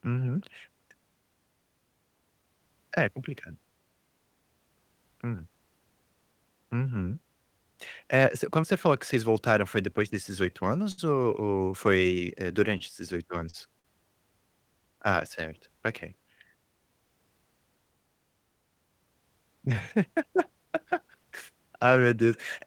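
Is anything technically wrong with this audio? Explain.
Yes. The speech has short stalls from late packets at 10.91–11.00 s, 12.78–12.82 s (just after "ou foi eh"), 13.50–13.56 s and 13.80–13.86 s. In each, the jitter buffer ran dry and the receiver held the last sound for 64, 22, 35 and 49 ms, then resumed, so sounds drag with a faint buzz.

There is also a jitter buffer speed-up at 16.15–16.45 s. With too much audio queued, the receiver cut small pitch-period slices, removing about 40 ms and running at 109% speed, so the speech sounds briefly hurried at unchanged pitch.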